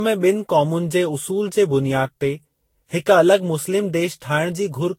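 Throughout the speech, the sound is swirly, smeared and hollow, with blurred consonant attacks and nothing above 16.7 kHz. This is generation loss, likely from roughly seven lossy re-encodes, each requantising on a shifted frame grid, consistent with Vorbis near 61 to 64 kbit/s.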